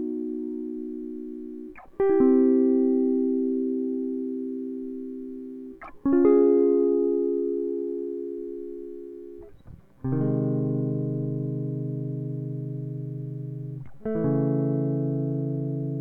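A music recording with no technical faults to be heard anywhere in the signal.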